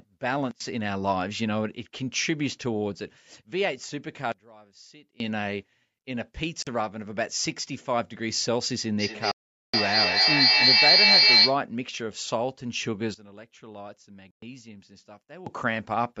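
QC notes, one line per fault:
0.51–0.60 s, 4.32–5.20 s, 13.14–15.46 s: sudden gain jump. The digital gain was likely switched in a single step with no ramp, so speech and background noise drop together by about 24 dB, 23 dB and 17 dB, then snap back when the gain is restored.
6.62–6.67 s, 9.31–9.74 s, 14.31–14.42 s: Bluetooth dropout. Audio packets likely missed their delivery time to the headphones and were discarded. The result is holes of 43.5 ms, 421 ms and 116 ms, and speech resumes further along, as if it had kept playing underneath.
8.99–11.64 s: feedback echo between two devices. A second device in the room replays this call, and the microphone picks it up again; its echo canceller only removes what its own device plays, so the echo gets through. Speech returns about every fifth of a second, growing thinner and more ringing, with the loudest repeats about 10 dB above the speech, so they pile up.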